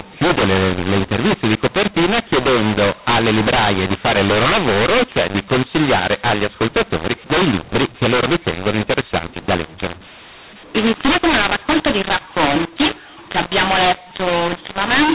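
From start to finish, the speech carries a mu-law and A-law mix-up. The telephone audio was coded with A-law but decoded as mu-law. Levels come out scrambled, so the speech sounds harsh and distorted. Quiet samples are lifted, and pauses fill with noise.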